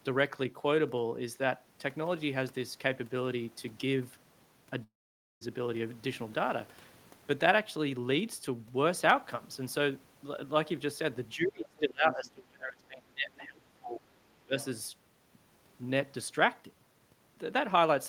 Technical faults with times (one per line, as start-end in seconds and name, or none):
4.83-5.43 long network dropout
11.35-14.11 speech suppressed in double talk
13.39-13.45 other side's voice leaking through
14.45-14.55 speech suppressed in double talk
14.60-14.64 other side's voice leaking through